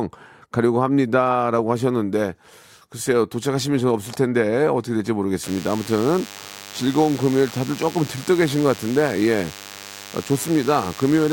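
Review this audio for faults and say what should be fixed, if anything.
From 5.43 s to the end of the speech, a thin, steady buzz at 100 Hz with many harmonics sits about 20 dB below the voice. This is DECT cordless phone buzz: a nearby handset or base bursts every 10 ms, and the audio circuitry rectifies those bursts. Keep DECT equipment away from the microphone and preamp, and use shielded, well-grounded cabling.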